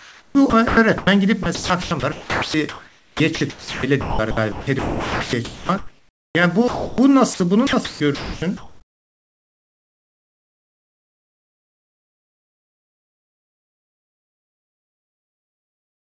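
From 0.00 to 1.07 s and 1.43 to 6.35 s the sound is chopped by the voice detector, likely switching repeatedly. About 0.56 s and 3.4 s respectively become comfort noise. At 6.68–6.98 s and 7.34–7.40 s the voice detector likely drops quiet sound, taken as background. Steady comfort noise fills 0.3 s and 0.06 s before the sound returns. From 7.67 to 16.15 s the chopping resumes, with about 8.1 s replaced. Throughout, nothing is heard above 8 kHz, fitting a G.722 call path, and room noise sits about 41 dB below the speech.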